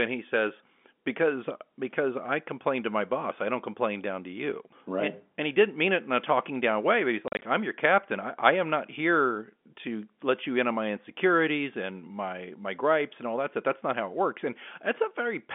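Between 7.28 and 7.42 s, after "down way but he's" and before "I'm your captain I", the speech breaks up through packet loss filled with silence. About 90 ms of audio drops out in several short holes across 140 ms, the longest 40 ms, which fits lost 10 ms packets. Each hole is dead silence with hard edges. Concealment would smear or repeat the sound instead. The narrow 200 Hz to 3.5 kHz telephone band of the G.711 line holds on either side of the gaps.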